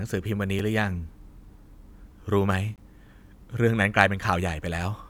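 Blocks of digital silence occur at 0.59 s and from 2.76 to 2.78 s, where the speech drops abruptly to silence and snaps back with no fade. The 3 ms gap registers as a tick, while the 20 ms gap is a short audible hole.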